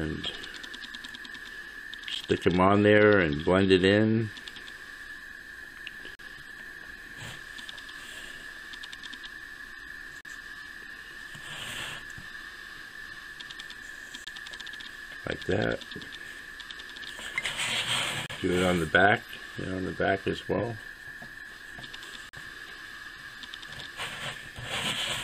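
Gaps between stream segments: the time stamps of consecutive 4-second segments leave small holes that the player fills with silence, so hard-edged dropouts of 9 to 42 ms interrupt the sound at 2.15 s, 6.15–6.19 s, 10.21–10.25 s, 14.24–14.27 s, 18.26–18.30 s and 22.29–22.33 s, with no audio lost.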